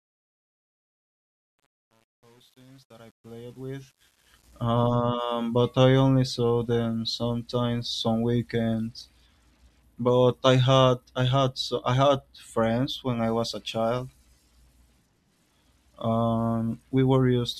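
Truncation distortion on a fade runs from 0.0 to 4.65 s, across the fade-in that reaches full level at 4.65 s. The fade was computed without dither at a coarse resolution, which fits about 9 bits, so the quiet speech collapses into square steps. Up to 4.12 s it sounds gritty.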